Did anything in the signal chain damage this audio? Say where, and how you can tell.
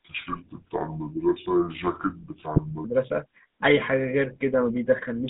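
Yes. The codec stage shows GSM full-rate codec damage across the whole clip. The speech has a plainly audible buzzy, gravelly roughness, and the band is confined to roughly 200 Hz to 3.7 kHz, which fits a 13 kbps GSM full-rate stream. The codec rebuilds speech from a vocal-tract filter excited by sparse, regularly spaced pulses, so fine detail becomes rasp. A spectrogram would show an empty floor below 200 Hz, a hard ceiling at 3.7 kHz, and smeared harmonics.

The network stage adds GSM bit errors at 0.32 to 0.39 s and again at 2.54 to 2.59 s. Each is a brief squawk or gargling pop, short enough to fit two or three corrupted 20 ms frames. Flipped bits in the filter, pitch or gain parameters make the decoder synthesise a bent spectrum or a wrong level for those frames. On a spectrogram they appear as vertical slabs of misplaced energy that break the harmonic pattern.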